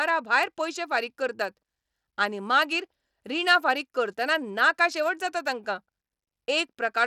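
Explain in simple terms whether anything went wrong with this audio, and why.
The speech has plainly audible Bluetooth SBC compression throughout, likely: the treble flickers with a gritty edge, unlike plain muffling, which loses treble smoothly without grit.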